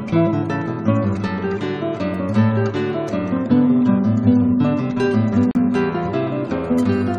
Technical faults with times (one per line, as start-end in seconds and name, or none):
5.51-5.55 gap at a join of encoded pieces